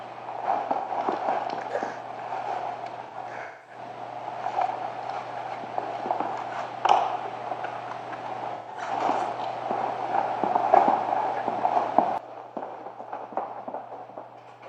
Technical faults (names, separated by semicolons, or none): AAC frame loss with concealment